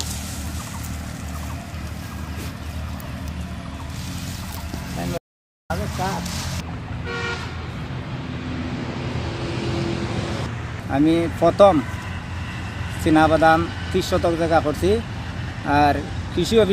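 At 5.18 s the sound cuts to dead silence for 0.52 s, resuming at 5.70 s; an audio dropout to silence, likely from a lost input while recording continued.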